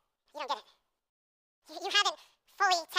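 Throughout the recording, the samples are played back at roughly twice the rate they were captured at, with no conversion. That fits audio recorded near 22 kHz and played at 44.1 kHz. This wrong sample rate doubles the speed and raises pitch by 12 semitones, so the speech sounds a full octave high and hurried.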